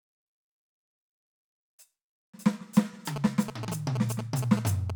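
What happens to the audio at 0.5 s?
Nothing goes wrong at 0.5 s; the music plays through that moment intact, with no dropout, click or distortion.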